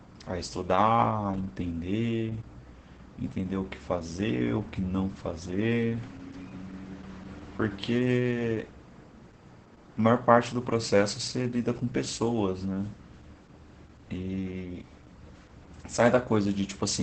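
Throughout the speech, Opus voice compression is audible and heavy. The linear-prediction coder, running in wideband mode, rebuilds the voice from a coarsely coded excitation, so it comes out muffled, hoarse and faintly robotic, which fits a bitrate around 10 kbps. On a spectrogram, energy stops abruptly at 8.7 kHz, leaving an empty band above. Harmonics below look smeared and blocky, changing in steps consistent with 20 ms frames.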